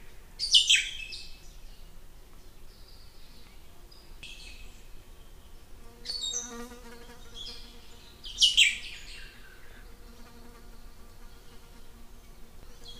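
An everyday-sound recording with audio missing between chunks: the sound jumps forward abruptly at 1.43, 4.23, 7.03 and 12.63 s, each time dropping about a fifth of a second with no gap of silence. This is likely a recorder or processor handling the audio in 3-second blocks and losing a piece at each handover. On a spectrogram each skip shows as a sharp vertical seam where textures fail to line up. The waveform shows a sudden splice.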